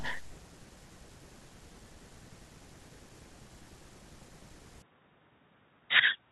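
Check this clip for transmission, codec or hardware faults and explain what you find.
One fault appears. From 4.82 s to the end, the input likely switched to a poorer device with a narrower band. The speech turns dull with nothing above 3.8 kHz, drops about 10 dB, and gains a faint new noise floor, with no gap at the switch.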